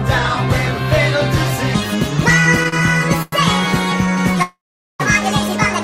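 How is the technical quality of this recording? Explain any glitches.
Technical quality is poor from about 1.75 s onward: a sped-up section, two brief stalls and one longer freeze.

Section at the wrong speed: from 1.75 s to the end, everything runs about 1.59 times too fast, so pitch jumps up roughly seven semitones and the pacing feels rushed. Speed and pitch shift together, which likely means that stretch was played back against the wrong clock, for example a sample-rate mismatch in an editor or player. The rest of the clip then sits unnaturally high and hurried.

Short stall from a late packet: there are two, at 2.69 to 2.74 s and at 3.22 to 3.34 s. In each, a packet showed up late and the jitter buffer ran dry. The receiver held the last bit of sound until the packet arrived, for about 37 ms the first time and about 99 ms the second. Nothing gets dropped, but you hear a sound hang slightly too long with a slight buzz or dip.

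Call audio freeze: from 4.42 to 5.02 s the audio stops moving forward for about 575 ms. A longer hold-up in the packet stream likely emptied the jitter buffer. The receiver briefly stretches the last sound, which fades out, and that leaves roughly 430 ms of silence. When the packets catch up, playback resumes exactly where it left off, so a gap has been inserted rather than anything lost.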